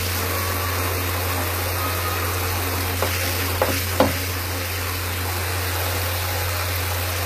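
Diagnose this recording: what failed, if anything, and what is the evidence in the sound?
Codec stage: nothing above 14.9 kHz throughout, a flat spectrogram ceiling; likely low-bitrate audio saved at a high bitrate, so the MP3 cannot restore it.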